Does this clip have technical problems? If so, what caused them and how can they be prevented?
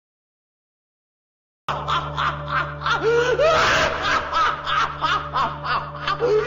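Yes. The clip has a cut-off start: it opens with digital silence until 1.69 s, where the sound begins abruptly partway through, with no natural attack or fade-in. Capture or streaming started late and missed the opening. Prevent it by starting recording before the source begins and keeping a short pre-roll buffer.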